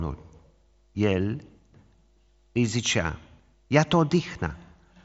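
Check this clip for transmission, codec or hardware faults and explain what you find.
Nothing stood out on listening to this speech, which comes across as ordinary wideband Bluetooth headset audio with its top end stopping a little below 8 kHz.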